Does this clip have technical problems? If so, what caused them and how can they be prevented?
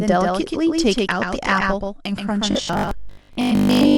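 Yes. A doubled audio track runs through the whole speech clip: a second full-band copy, about 5 dB quieter, trails roughly 150 ms behind. Unlike room echo, it has no decay or reverberant colour, just one clean repeat. It is likely caused by the signal being captured twice, once through a slower path. Route the source through a single capture path and mute duplicate monitoring or loopback inputs.

From 2.51 s to 3.97 s there is robotic sound from repeated short buffers: a rigid, metallic 50 Hz buzz that still loosely tracks the speech. That pitch fits a 20 ms block being replayed, with most of the real audio skipped. Unlike mains hum, the buzz exists only within the speech. Its likely cause is audio arriving too seldom for playback. Enlarge the buffer and reduce processing load so data arrives on time.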